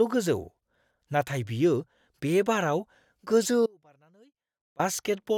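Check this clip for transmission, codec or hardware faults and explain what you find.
There is one fault, an audio dropout to a faint residue from 3.66 to 4.79 s. The speech cuts off abruptly for about 1.13 s, the path likely still live while the signal failed upstream, so the gap keeps only a faint leak roughly 30 dB down before the speech snaps back.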